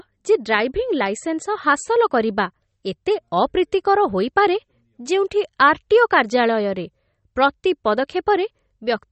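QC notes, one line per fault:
Throughout, MP3 compression: the speech has nothing above 8.4 kHz and sounds dull and watery, with smeared, swirly s sounds. The likely cause is a starved MP3 encode, consistent with about 32 kbps. A spectrogram shows a flat ceiling at 8.4 kHz and flickering gaps below it.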